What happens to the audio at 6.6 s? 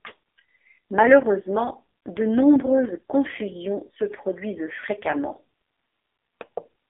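AMR narrowband mobile codec damage is present at 6.6 s, as it is throughout the clip. The speech passes through a 300 Hz to 3.5 kHz band, rebuilt by a vocal-tract model at a very low rate, consistent with about 5 kbps, so it sounds buzzy and synthetic.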